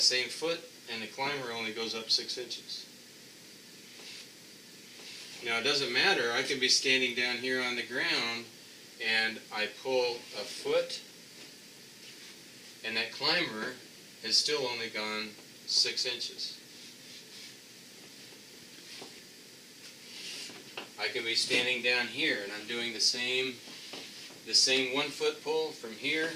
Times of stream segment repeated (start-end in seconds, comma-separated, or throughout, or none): 4.21-5.21